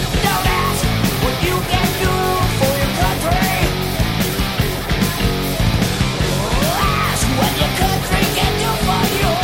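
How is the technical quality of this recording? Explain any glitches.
No glitches can be heard in the recording, and the signal stays continuous and technically sound throughout.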